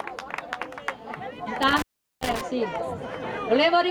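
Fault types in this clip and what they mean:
Intermittent contact: a loose cable or plug briefly opens, so the sound drops out with crackle at its edges between 1.62 and 2.41 s, about 0.39 s of gap.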